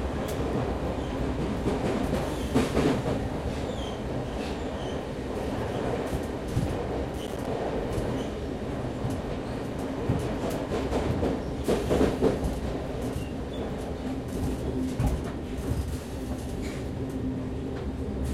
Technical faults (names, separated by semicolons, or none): processor overload crackle